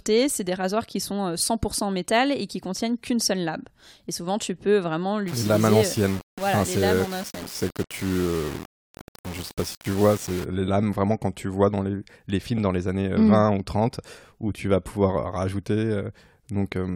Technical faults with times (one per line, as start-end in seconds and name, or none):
5.28-10.44 low bit depth without dither
12.58-12.60 loud pop